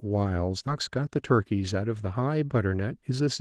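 Speech with a skip ahead at 0.67 to 0.69 s. Roughly 0.4 s of audio is missing, and the sides of the cut are joined with no fill, so the sound lurches forward abruptly. This comes from a late stretch being discarded while newer audio was already queued. Jitter buffer speed-up follows at 0.78 to 1.90 s (109% speed) and again at 2.66 to 3.28 s (113%). Each pass trims around a tenth of a second by cutting short pitch-period slices, so the speech sounds rushed at unchanged pitch while the receiver drains excess buffered delay.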